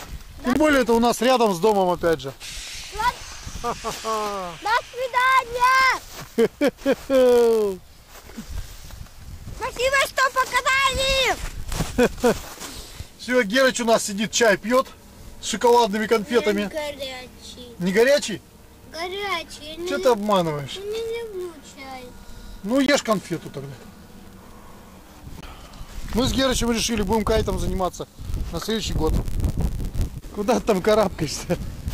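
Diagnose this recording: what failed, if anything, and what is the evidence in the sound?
A steady buzz at 91.5 Hz rides under the sound for the whole recording, and everything plays 0.996 times as fast as it should, so it runs about 0.4% slow. This points to the driver or buffer stage and a block size mismatch (padded). One stage hands over blocks slightly shorter than the next stage expects, and the remainder of each block is filled with silence. Those tiny zero gaps recur at 91.5 per second, which is the buzz, and they stretch the timeline by the ratio of the two block sizes.

Three short holes of silence cut in at 0.53–0.56 s, 22.86–22.89 s and 25.41–25.43 s. Each lasts about 20 ms, and the sound resumes further along as though it had kept playing underneath. The likely cause is a Bluetooth dropout on the wireless link to the playback device. Each gap is the length of a single lost audio packet that missed its delivery deadline and was discarded, so the output fell silent until the next good packet arrived.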